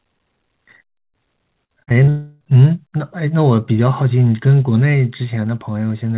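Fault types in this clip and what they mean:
Repeated packet loss (robotic sound): From 1.64 to 2.09 s the speech turns choppy as four short holes, the longest about 53 ms, are each patched by extending the previous sound. About 29% of that stretch is concealed fill rather than real audio.
Long network dropout: From 2.09 to 2.43 s the sound is replaced by roughly a third of a second of continued, smeared tone with no silence at all, likely a long network dropout where the receiver stretched the last audio across about 313 ms of the gap.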